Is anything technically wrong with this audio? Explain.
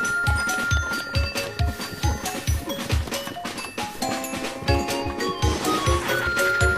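Yes, there are compressed frames skipped at 5.02–5.07 s and 6.23–6.28 s. A few damaged or missing frames, sized to fit a 46 ms frame, drop out, so the audio jumps ahead roughly 150 ms.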